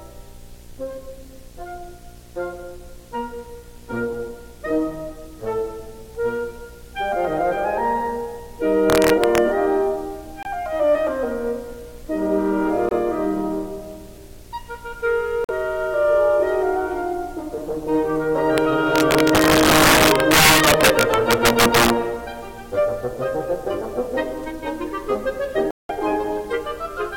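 Video or display buzz runs under the whole of this music: a steady buzz at 60 Hz, the picture's field rate, with a layer of hash above it, sitting roughly 25 dB below the music. A screen or video cable is coupling into the audio path, so the interference rides along continuously rather than coming and going with the programme.

Integer overflow first strikes from 8.9 to 9.38 s. The loudest peaks push about 2 dB past the largest value the integer format can hold, and instead of being limited they wrap to the opposite sign, jumping across the full range. Each such peak becomes a violent crack, far harsher than ordinary clipping.

Corrupt frame muted follows at 10.43 s, a hole about 38 ms long, then at 12.89 s (about 62 ms) and 15.44 s (about 60 ms). Damaged bits made the decoder reject the affected compressed frames, and the player filled those spans with silence. Each gap starts abruptly, points to two or three frame lengths, and the music resumes on time afterward.

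Integer overflow returns as a single crack at 18.58 s, from a peak about 1 dB over the limit, and then in a sustained stretch from 18.96 to 21.9 s. There the overdrive reaches about 6 dB, so many more peaks wrap around, and the passage is riddled with sharp, violent cracks throughout.

Corrupt frame muted is longest at 25.71 to 25.91 s, a silent hole of about 204 ms. The sudden dropout fits a run of roughly eight rejected frames replaced by silence, with timing kept so the music picks up exactly where it should.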